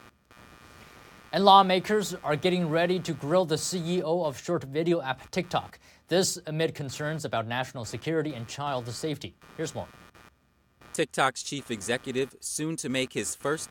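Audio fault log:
throughout computer activity noise. A faint buzzy chirp runs beneath the speech, pulsing roughly a hundred times a second and sitting about 30 dB down. Load changes of the processor, graphics card or mouse disturb the shared ground.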